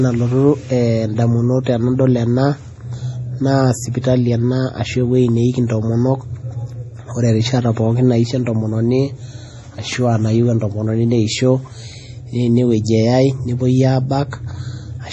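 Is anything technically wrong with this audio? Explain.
Yes. Throughout the speech, the sound is watery and swirly, with metallic chirps on s sounds and nothing above 11.5 kHz. This is likely heavy MP3 compression, consistent with a bitrate around 32 kbps: starved of bits, the encoder cuts the treble and drops weak frequency lines frame by frame. A spectrogram shows a flat ceiling at 11.5 kHz and patchy, flickering holes below it.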